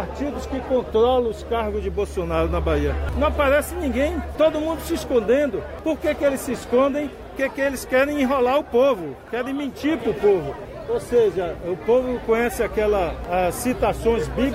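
At 3.13 s the output briefly went unfed: a block of digital silence about 5 ms long replaced the audio, most likely because the program missed a buffer deadline. The signal drops to zero and returns with no fade, so it is heard as a single tick.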